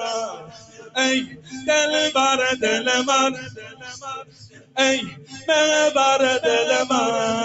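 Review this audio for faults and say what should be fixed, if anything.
There's a speech-tuned noise suppressor left running on this non-speech sound. It treats sustained, steady material as noise, so the level swings by roughly 15 dB and the audio pumps.

You can hear sound cut by the noise suppressor at 0.26–0.97 s, 1.24–1.68 s, 3.33–4.77 s and 5.05–5.48 s. Held parts sink by about 15 to 19 dB while the attacks survive.

To fix it, switch the suppressor off or use a music mode for anything that isn't speech.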